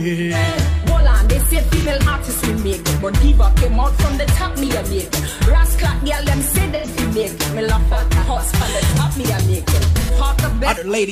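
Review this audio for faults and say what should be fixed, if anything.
AAC frame loss with concealment occurs at 1.76–1.87 s, 6.75–6.87 s and 10.00–10.11 s. Each gap is about 85 ms, which fits two lost AAC frames, and the decoder fills it from the last good spectrum, leaving a brief smeared, noisy patch. To prevent this, add forward error correction or retransmission on the transport carrying the AAC stream.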